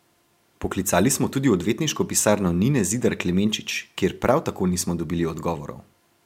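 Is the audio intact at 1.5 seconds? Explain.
Yes, the audio is intact at 1.5 seconds, with no dropout, click, distortion or other fault audible at that point in the speech.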